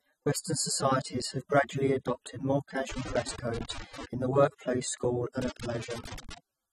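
A speech recording that has likely passed through low-bitrate AAC compression, at a rate the damage suggests is around 24 kbps. With so few bits, the encoder cuts off everything above 13.8 kHz and quantises the remaining bands coarsely against its hearing model. The voice therefore sounds dull and smeared throughout, with a plainly audible swirling, fizzy texture on sustained vowels and sibilants. Separately, a loose connector crackle appears twice, caused by a worn or dirty contact rapidly making and breaking the signal path. It first hits from 2.90 to 4.05 s, right after "have gradually adopted more" and ending before "in the workplace school", and again from 5.42 to 6.38 s, following that phrase. Each time the signal is chopped into an irregular burst of scratchy crackle laid over the speech.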